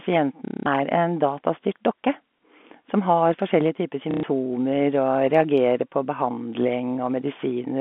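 A speech recording on a G.711 telephone path, band-limited to about 200 Hz to 3.5 kHz, shows packet loss with the last packet repeated from 0.45 to 0.66 s and from 4.11 to 4.23 s. Each gap is filled by replaying one packet, so the run becomes a robotic stutter buzzing near 33 Hz. The 210 ms and 120 ms spans fit 30 ms packets.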